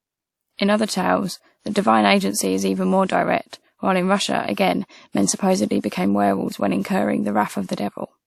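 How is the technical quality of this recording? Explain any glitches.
The quality is limited by one problem that runs through the whole recording. Throughout the speech you can hear low-bitrate audio saved at a high bitrate. The file is a 192 kbit/s MP3, but the artefacts point to an earlier lossy pass, likely a WMA encode at around 64 kbit/s. The higher bitrate just preserves that damage without restoring anything.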